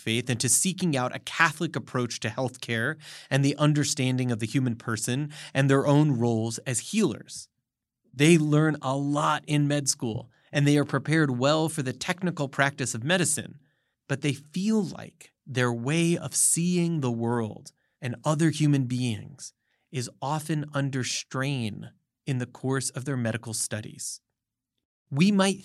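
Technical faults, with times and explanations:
No technical faults in this speech clip, so there are no times or explanations to give.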